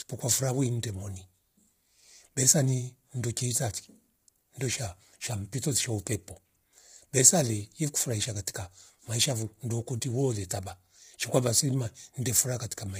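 Low-delay AAC compression runs throughout the speech, from the first second to the last. The voice sounds rough and grainy, with a hiss filling the gaps between harmonics, and nothing is present above about 15.6 kHz. The likely cause is AAC-ELD, the low-delay coder of video calls, whose short frames separate pitch harmonics poorly and spend bits fast. The heavy damage fits a bitrate near 24 kbps.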